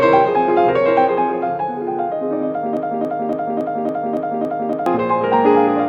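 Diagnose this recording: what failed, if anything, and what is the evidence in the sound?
A broken-record loop runs from 2.77 to 4.86 s: a 280 ms fragment repeats exactly, back to back, seven times. The player or stream likely stalled at the buffer stage and kept resending its last fragment, so the audio due in that span is lost.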